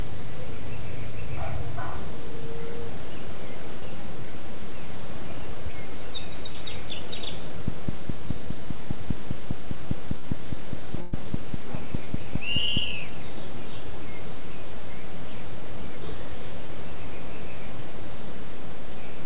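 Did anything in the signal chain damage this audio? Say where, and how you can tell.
Yes. Short concealed packet loss in the network stage appears at 3.80–3.83, 5.71–5.74, 6.52–6.56, 12.04–12.08 and 16.66–16.70 s. Each is a brief smear or wobble where about 20 ms of audio never arrived and the decoder extended the preceding sound to bridge it.

A train of clicks runs from 7.68 to 12.78 s: about thirty near-identical pops at a regular 4.9 per second, peaking about 5 dB above the sound. That steady, uniform pattern most likely points to interference or a struggling interface in the analogue or converter stage.

Bursts of packet loss, also a network fault, occur at 10.18–10.25 s and 11.01–11.14 s. The receiver held and faded the last sound for roughly 50 ms and 110 ms, then resumed further along, so the intervening audio is gone. The G.711 call path itself was working normally, with its usual 4 kHz top end.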